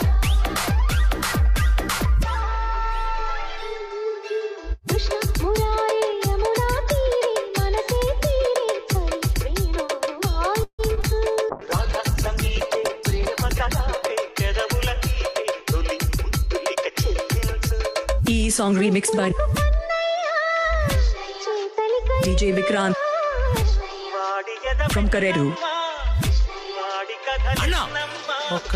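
At 10.63 s the sound stalls for about 0.17 s. It trails off into a fading buzz, then about 70 ms of silence. It resumes where it stopped. This is a call audio freeze, likely from packets held up until the jitter buffer ran dry.

Two short concealed packet losses follow, at 10.95 to 10.99 s and 11.01 to 11.04 s. About 20 ms is lost each time. The gap is patched from the preceding sound, leaving a brief smear.

From 11.51 to 15.71 s comes a call bitrate drop, from 96 to 11 kbps. The lowest rate lasts about 1.9 s. The sound turns muffled and watery, with its highs cut.

From 14.73 to 19.17 s a jitter buffer speed-up plays the audio at 103% speed, with pitch unchanged. Roughly 150 ms is trimmed in small pieces.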